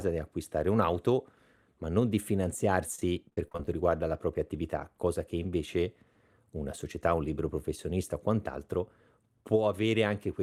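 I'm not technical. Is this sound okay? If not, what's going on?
No. From about 2.95 to 3.68 s, just before "riguarda la propria attività", there is repeated packet loss (robotic sound): ten short holes, none longer than 35 ms, each patched by repeating the last bit of sound. Unlike a single dropout, they come in quick succession, so the stretch sounds choppy.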